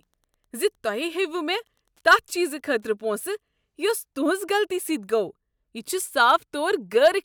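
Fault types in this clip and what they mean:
Wi-Fi interference: A nearby Wi-Fi radio is picked up by the audio circuit, which rectifies its transmissions into audible clicks. Here it appears as a steady tick under the speech from the start to about 3.33 s. The ticks repeat every 102.4 ms, close to ten per second. That regular rhythm points to the radio's beacon signal. The ticking sits very low, far beneath the speech.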